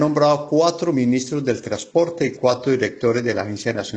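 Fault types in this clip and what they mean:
Adaptive stream at a lower bitrate: the player dropped to a lower-bitrate version of the stream as the connection slowed, so from 1.35 s to the end the treble turns synthetic and codec artefacts rise, suggesting HE-AAC near 16 kbit/s. The switch is abrupt, without a gap.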